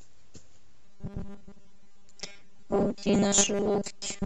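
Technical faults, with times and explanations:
0.85 to 4.26 s, robotic sound from repeated short buffers. The speech turns into a rigid, metallic buzz at 200 Hz. It still loosely follows the words. The likely cause is a 5 ms chunk replayed over most of this stretch, skipping fresh audio.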